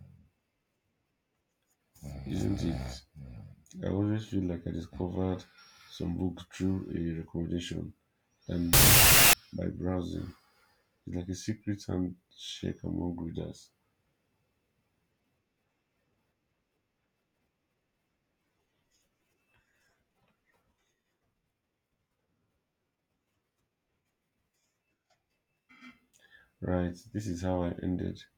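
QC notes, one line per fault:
8.73–9.33 s, wrong sample width: a burst of loud broadband noise with the speech buried underneath, running at half speed and an octave low. This points to 32-bit float data read as 16-bit integers, so each sample splits into two values.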